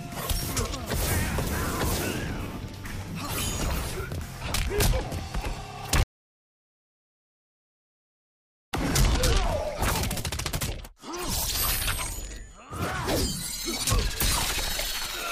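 At 6.03 s the sound cuts out to complete silence until 8.73 s, an audio dropout to silence. About 2.7 s is lost. The input likely disconnected while zeros were written.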